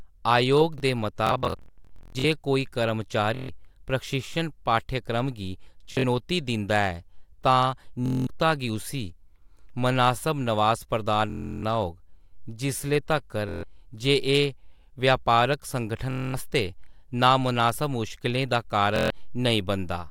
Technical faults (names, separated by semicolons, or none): chunks out of order; Bluetooth stutter